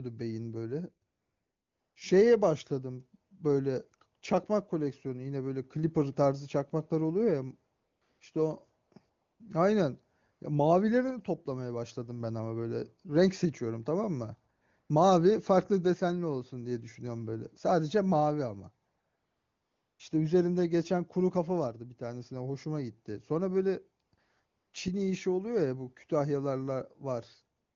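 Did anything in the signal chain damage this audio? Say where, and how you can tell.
Yes: the damage happens at the call-processing stage, as AMR comfort noise. Eleven times between 1.09 s and the end of the clip at 27.76 s, the real background drops out during pauses and a smooth, steady synthetic hiss replaces it. These gaps last from 20 ms to 1.1 s, and the longest are at 1.09 s and 18.89 s. The sender's voice activity detector treated these stretches as silence and stopped sending speech frames, so the receiver filled each gap with generated noise. The wideband codec itself sounds clean.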